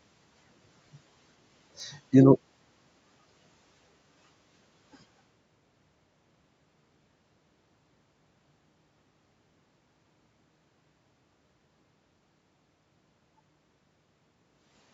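A brief loss in the stream, most likely dropped samples, where only a handful of samples (a tiny fraction of a millisecond) went missing, hits this speech recording at 1.80 s. Because the waveform jumps straight from one value to a later one, nothing audible is removed. Instead there is one sharp click at that moment, seen as a thin vertical line across the spectrum. The call's microphone processing takes out the lowest bass.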